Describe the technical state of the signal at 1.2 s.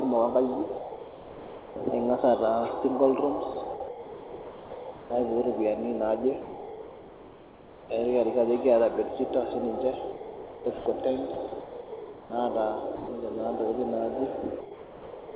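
At 1.2 s the speech drops in and out of a flat synthetic hiss between 0.66 and 1.86 s, with about 1.04 s replaced, likely sound chopped by the voice detector, which swapped in comfort noise.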